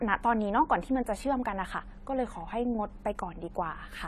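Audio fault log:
Throughout, AAC compression: nothing above 14 kHz, and a plainly audible smeared, fizzy texture on the speech, likely from a low bitrate near 32 kbps.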